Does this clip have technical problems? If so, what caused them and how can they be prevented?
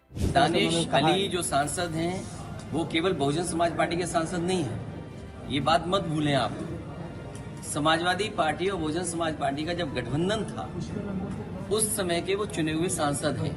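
No, there are no technical faults in this clip, so nothing needs preventing.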